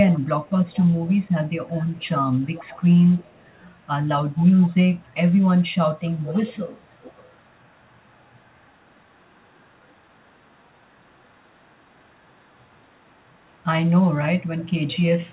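Echo leak is heard from 0.09 to 3.87 s, 4.31 to 4.76 s, 5.66 to 5.71 s, 6.05 to 13.9 s, and 14.41 s to the end. A faint copy of the speech trails 319 ms behind. It sits about 25 dB down at first and is strongest, near 20 dB down, at 4.31 s. It then falls to about 40 dB down before returning to about 30 dB down at the close. The likely cause is a loudspeaker on one side of the call whose echo canceller let part of the microphone pickup back into the call.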